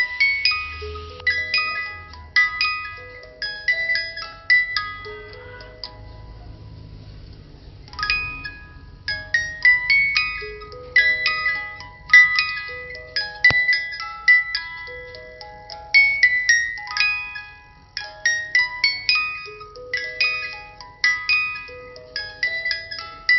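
Listening closely, nothing in the audio stood out as a technical problem at any point.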